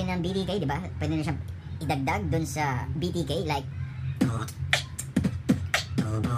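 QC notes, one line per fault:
throughout: wrong sample rate. Everything runs 1.38 times fast and 5.6 semitones high, which fits 32 kHz audio played at 44.1 kHz unconverted.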